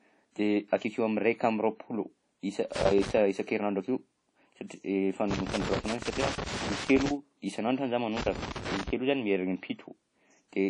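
Throughout the speech, the sound is washy and ringing, and nothing is heard above 10.1 kHz. The damage is plainly audible. This is likely WMA compression at a low bitrate, which fits about 32 kbps. Long transform blocks smear quantisation noise over time.

Loose connector crackle comes in three bursts: 2.75 to 3.18 s, 5.31 to 7.11 s, and 8.17 to 8.90 s. A bad contact makes and breaks over and over, chopping the signal. Each burst is heard as irregular crackle and scratching.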